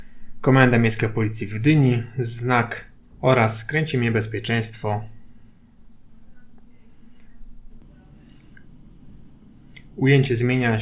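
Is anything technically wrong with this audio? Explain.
No, nothing technically wrong can be heard in this audio. There is no fault to describe.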